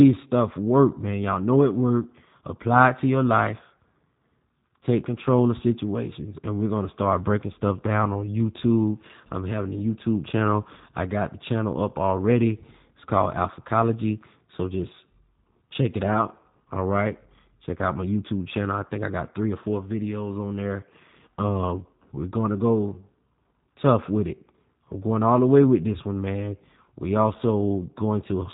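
The speech has been through G.729 coding for its whole length, which rebuilds the speech from a vocal tract filter, a pitch predictor and sparse pulses at what sounds like 8 kbit/s. Nothing passes above about 3.8 kHz, and the damage is plainly audible as a rough, slightly synthetic quality.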